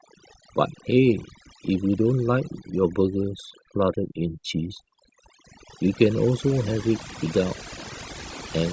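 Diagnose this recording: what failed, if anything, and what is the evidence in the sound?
Speech over near-silent gaps with twinkling specks throughout points to overdone noise removal in call processing, suppressing bands near its noise estimate along with quiet speech detail.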